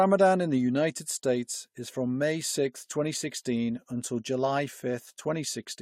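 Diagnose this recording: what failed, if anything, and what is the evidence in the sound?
Nothing failed; no stage of the chain shows trouble.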